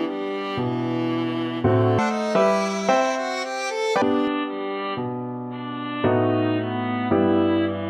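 From 1.99 s to 4.02 s the section at the wrong speed was likely played against the wrong clock, running at twice the recorded rate. Speed and pitch jump together, so the sound turns hurried and shrill, raised by around ten semitones, before dropping back at 4.02 s.

At 4.28 s the input was likely switched to a poorer device with a narrower band. With no gap at the switch and much the same level, the sound abruptly turns dull and boxy, with a faint new noise floor well below it, through to the end.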